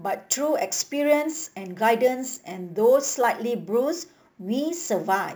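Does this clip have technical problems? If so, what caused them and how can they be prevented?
Yes. Crude rate conversion affects the speech from start to finish. Samples were repeated rather than filtered, and the repeat pattern points to a step up from 32 kHz to 44.1 kHz. That irregular repetition adds an inharmonic fizz roughly 20 dB below the speech, rising and falling with loud and bright sounds. Codec artefacts, by contrast, swirl or smear, and aliasing folds down only high content, not a constant grit. To prevent it, resample with a proper band-limited resampler.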